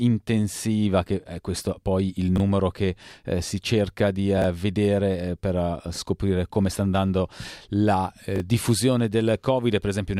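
Chunks out of order at 2.36–2.40 s, 4.38–4.44 s and 8.36–8.40 s: a 20 ms block of audio plays one chunk late (two at 4.38 s), after its successors, leaving brief jumbled moments, each with three hard joins.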